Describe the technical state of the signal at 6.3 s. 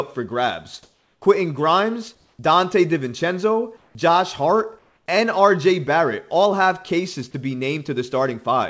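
At 6.3 s the speech is intact, with no dropout, glitch or distortion, only the band limit of the call path, which carries nothing above 8 kHz, as fits a wideband codec such as G.722.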